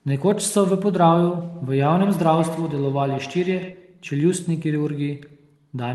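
From 1.54 to 3.81 s, the speech comes round again roughly every tenth of a second, each repeat thinner and more ringing, peaking about 13 dB below the voice. This is feedback echo between two devices: one device replays the other's microphone feed, which is picked up again beyond either echo canceller's reach.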